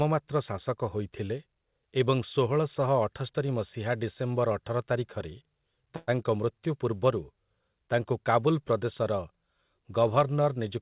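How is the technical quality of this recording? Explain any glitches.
The recording has one clear glitch, a call audio freeze. It comes through a call path with nothing above 4 kHz, which fits G.711 mu-law at 64 kbps.

From 5.96 s to 6.10 s the sound stalls for 115 ms. The last sound hangs on as a short buzz or hiss that fades. Packets were likely held up in transit, so the jitter buffer ran empty. The receiver stretched what it had to fill the wait. When the audio resumes, nothing is missing. It simply runs 115 ms later than before.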